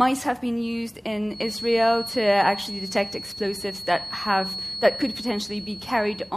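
From 1.27 s to the end of the clip, a feedback whistle sits behind the sound. It is a thin, steady tone at about 4.3 kHz. It stays roughly 10 dB below the main signal and swells and fades slowly in level. The likely cause is a loudspeaker-to-microphone loop balanced right at the edge of feedback. One frequency keeps ringing there. It does not grow into a howl, so it hangs on as a fixed whistle.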